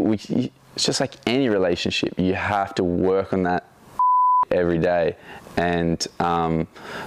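No dropouts, glitches, distortion or other technical faults can be heard anywhere in the audio.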